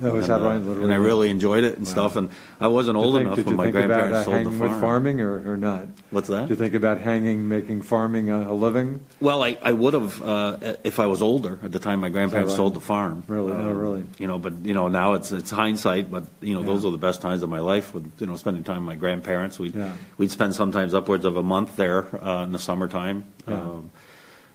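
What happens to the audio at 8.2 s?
Nothing goes wrong at 8.2 s; the audio plays through that moment without any audible fault.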